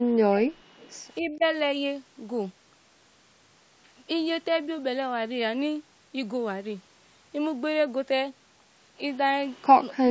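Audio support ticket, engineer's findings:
Speech suppressed in double talk, 0.09 to 0.77 s: the level drops hard, about 40 dB at the deepest point. The near end is likely being ducked by the echo canceller while both sides overlap. Same thing at 1.19 to 1.44 s but milder, a dip of about 10 dB, so it dips rather than vanishes. It hits again at 9.92 to 10.1 s, deep at about 40 dB, right at the end of the clip.

Echo leak, 0.8 to 0.9 s: a short, faint copy of the voice trails 263 ms behind the original and sits about 30 dB under it. It comes right after the first suppressed patch. The likely cause is the loudspeaker side's echo canceller not fully cancelling what its mic picked up, so the residue gets sent back down the line. The mic chain's high-pass and the top end stopping at 8 kHz are normal.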